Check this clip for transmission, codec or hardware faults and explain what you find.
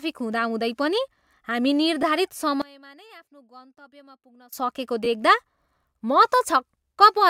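One fault stands out. From 2.62 to 4.53 s the speech collapses, dropping by about 26 dB. The likely cause is one channel inverted. One stereo channel has its polarity flipped. When left and right are summed to mono, everything the two share cancels. Centred speech is almost entirely shared, so it nearly disappears. What remains is only the small difference between channels. It is a faint trace of the speech, far below the surrounding level.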